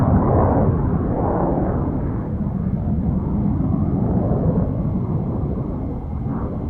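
An everyday-sound recording with a skip ahead at 2.25 s. About half a second of audio is missing. Playback jumps straight from the material before the cut to later material, with nothing inserted to cover the join, so the two sides butt together almost directly. The skipped stretch was discarded in transit or dropped by an overflowing jitter buffer while later audio was already queued, which cut the playback delay by roughly half a second.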